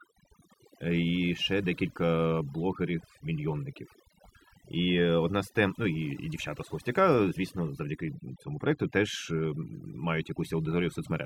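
Overdone noise removal throughout: an overly aggressive noise reducer switches off frequency bands near its noise estimate, leaving twinkling specks in near-silence and taking quiet parts of the voice with them.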